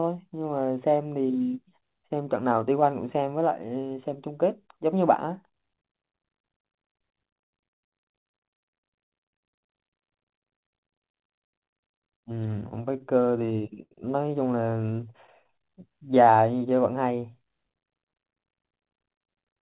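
From 12.4 to 13.93 s the speech stutters: repeated stalls, 13 of them, where late packets left the jitter buffer empty and the receiver stretched the last sound to bridge each wait, the longest about 86 ms. Roughly 15% of that stretch is filled this way, yet nothing is lost. Unlike a slow-down, it catches and drags in separate jerks.

A jitter buffer slow-down follows from 14.63 to 15.09 s, running at 94% speed with 36 ms added, as the receiver repeats single pitch periods to rebuild its reserve. The pitch holds while sounds draw out smoothly, with no halting break.

Overlapping it, from 14.81 to 15.54 s, come scattered short gaps: about seven isolated late or lost packets, each no longer than about 10 ms and about 50 ms in all, patched by continuing the last sound. These are brief ticks and smears, not a steady drag or stall.

A second slow-down runs from 15.58 to 16.7 s at 88% speed, adding 139 ms, more noticeably drawn out.

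From 18.54 to 19.59 s a jitter buffer speed-up trims short pitch-period pieces, about 100 ms overall, to shed excess delay. The speech runs at 109% with unchanged pitch and sounds hurried, the opposite of the earlier stretching. Throughout, the G.711 mu-law call path leaves nothing above 4 kHz.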